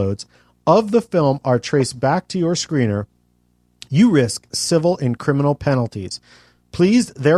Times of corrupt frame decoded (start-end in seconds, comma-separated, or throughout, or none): 1.80